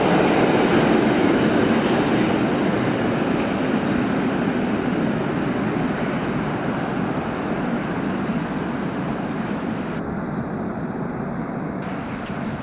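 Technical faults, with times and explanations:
9.99–11.82 s, channel delay (comb filtering): For about 1.8 s the sound turns hollow and phasey, with a fixed dip in the upper range. One channel lags the other by a fraction of a millisecond, and summing them to mono cancels their shared content at evenly spaced frequencies. The first notch sits near 3 kHz. Because the call path carries nothing above 4 kHz, that notch is the only one audible, so it reads as a single steady hole rather than a series.
12.26–12.29 s, sound dropped by the voice detector: For 30 ms the sound gives way to a short patch of steady, featureless noise before the clip ends. The likely cause is the sender's voice detector classing that moment as background and pausing transmission. The receiver filled the gap with comfort noise, which carries only a rough level and spectral shape, so the original detail is gone for that stretch.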